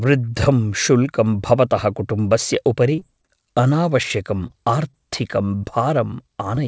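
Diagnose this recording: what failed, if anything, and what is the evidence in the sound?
At the network stage, packets were lost repeatedly from 2.96 to 3.30 s, just after "भवतः कुटुम्बस्य". Five concealed gaps, each up to 30 ms, leave choppy, robotic speech.

Also in the network, there was short concealed packet loss: single 20 ms packets went missing at 4.47, 4.91, 5.62 and 6.55 s. The decoder's continuation of the preceding sound leaves brief smears or wobbles.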